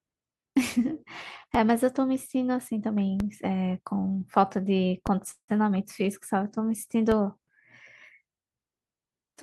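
At 1.55, 3.20 and 5.07 s, and again at 7.12 s, the speech has a DC step: the waveform's zero line suddenly jumps, then drains away as though through a 5 Hz high-pass. Each step is a low thump or click under the speech. Between the third and fourth, from 5.31 to 5.50 s, there's a call audio freeze, likely from late packets draining the jitter buffer. The last sound is stretched into a fading buzz or hiss, with about 70 ms of near-silence. The speech then resumes with nothing lost, just 167 ms later.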